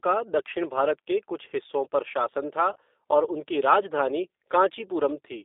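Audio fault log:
Throughout: G.729 codec. The speech is rebuilt from a vocal tract filter and pitch model, which fits an 8 kbit/s codec, giving a plainly rough, synthetic tone. The band runs from 300 Hz to 3.7 kHz.
2.73–2.79 s: VoIP packet loss concealed by the speech codec. About 30 ms of audio is missing, which fits a single lost packet. The decoder extends its last pitch and filter into a fading buzzy tone or coloured noise, and the following frames stay weakened.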